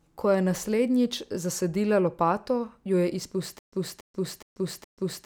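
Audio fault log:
3.59–5.26 s, stutter with silent gaps: just after "zasadila lopato jo je", a 282 ms burst of speech repeats four times every 417 ms, with 135 ms of digital silence between, running to the end. This likely comes from a stalled stream replaying its last fragment, so the intended speech is lost.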